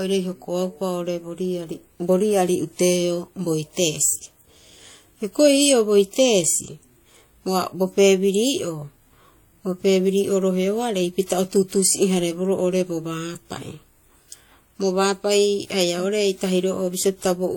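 Transcoding between lossy codecs runs throughout this speech clip: nothing survives above about 18.4 kHz, and two distinct sets of coding artefacts sit on top of each other, which likely reflects a WMA encode near 64 kbit/s re-encoded as HE-AAC near 40 kbit/s.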